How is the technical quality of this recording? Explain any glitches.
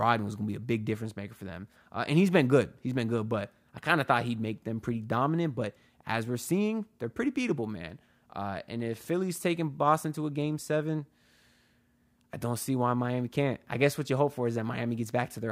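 The technical quality holds up, with no glitches to explain.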